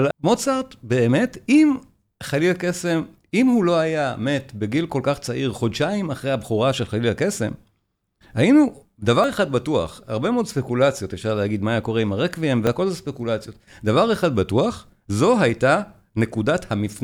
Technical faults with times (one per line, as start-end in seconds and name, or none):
9.24 dropped buffer (overrun)
12.67 dropped buffer (overrun)